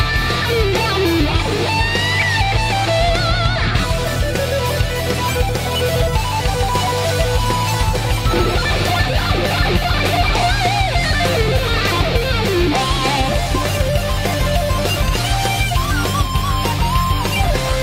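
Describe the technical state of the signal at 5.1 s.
At 5.1 s the signal is intact, with no fault to be heard at that moment.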